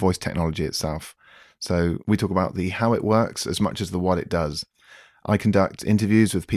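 No technical faults can be heard in this speech recording. Nothing in the audio stands out as a problem at any point.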